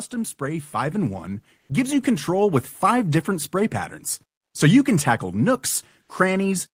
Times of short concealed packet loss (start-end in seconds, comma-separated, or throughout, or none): none